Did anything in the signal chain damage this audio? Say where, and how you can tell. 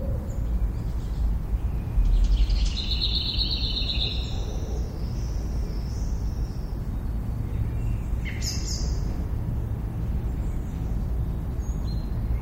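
Yes, at the codec stage, throughout. Faint detail flickers in and out, giving a watery, swirly texture with smeared attacks; that likely points to MP3 compression at a low bitrate, around 64 kbps. A plain low-pass filter would lack the swirl.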